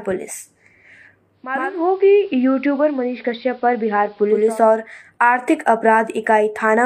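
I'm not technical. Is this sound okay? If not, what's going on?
No. From 1.31 to 4.64 s the speech turns muffled, a little quieter and faintly hissy, fading in and out over about half a second. That's digital radio blending to analogue: the radio lost its digital signal and switched to the station's AM broadcast, which has less treble.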